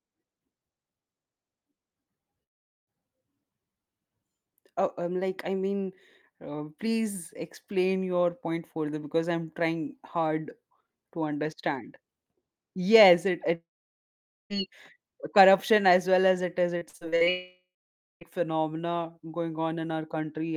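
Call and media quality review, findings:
Long network dropout, 2.43–2.90 s: sound cuts out for about 0.44 s. The last bit gets stretched into a short fading buzz, then it's almost all silence. Likely jitter buffer starved by lost packets.

Long network dropout, 13.55–14.53 s, right after "yes it": nearly a second gone, brief smeared tail, then about 0.86 s of silence. Likely a network outage, the missing stretch never replayed.

Repeated packet loss (robotic sound), 16.78–17.29 s, after "well as it is": six short holes, longest 44 ms, about 39% of the span patched by repeating the previous sound. The result is choppy audio with chunks missing.

Long network dropout, 17.30–18.24 s, straight after that: about 0.92 s lost, concealment hum fading out, then about 0.56 s of silence before audio resumes. Likely the same unstable link finally dropping out entirely.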